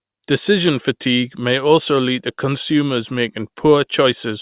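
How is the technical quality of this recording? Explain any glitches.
No technical faults can be heard anywhere in the recording, so there is nothing to explain.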